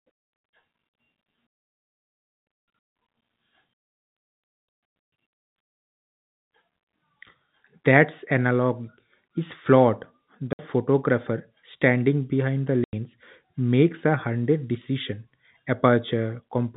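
At 10.53 s the speech drops out for 60 ms. At 12.84 s it drops out again, this time for 90 ms. Both are packet loss filled with silence. Data went missing in transit, and the receiver played nothing in its place. The gap lengths point to 30 ms packets, with two lost and then three. Each hole starts and stops abruptly. The band-limited telephone tone of the G.711 coding continues on either side of the gaps.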